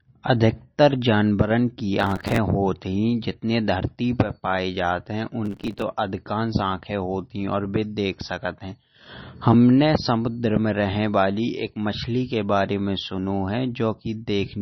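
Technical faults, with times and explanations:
Throughout, MP3 compression: the speech sounds watery and swirly, and there is nothing above 5.9 kHz. Such heavy damage points to a low bitrate, likely near 28 kbps. Unlike crackle, it never stops, because weak frequency lines flicker on and off from frame to frame.
2.00 to 2.38 s and 5.45 to 5.82 s, processor overload crackle: gritty tearing rides over the speech for about 0.37 s each time. It fits short buffers of about 5 ms repeatedly missing their deadlines, with dozens replaced by hard-edged scraps of old audio. Unlike the codec smearing, it stops once the load passes.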